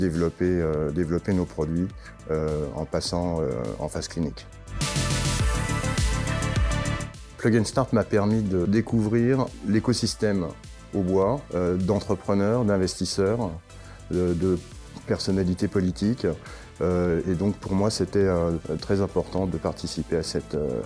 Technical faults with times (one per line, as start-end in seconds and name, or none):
none